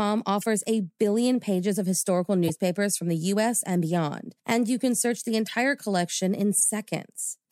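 Speech with four short corrupt frame decoded glitches: chirpy bursts at 0.41 s before "a billion pages of", 2.43 s, 5.46 s after "you can search the", and 6.58 s. Damaged compressed frames were decoded anyway, splashing energy at wrong frequencies, peaking at about -10 to -25 dBFS.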